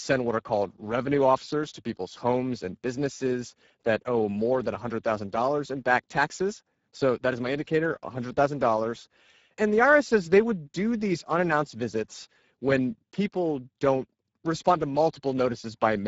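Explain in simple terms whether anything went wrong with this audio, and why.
Speex codec damage, from start to finish: this old speech compressor has too few bits here, so the speech sounds noisy and hoarse, and nothing survives above about 7.7 kHz.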